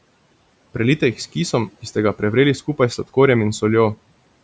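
No technical faults can be heard in this speech recording. It carries the band limit of call microphone processing, with nothing above 8 kHz, and a low room noise about 24 dB below the speech.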